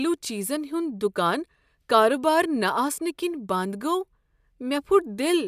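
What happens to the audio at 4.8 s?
Nothing goes wrong at 4.8 s; the speech there plays through intact, with no dropout, click, distortion or other fault.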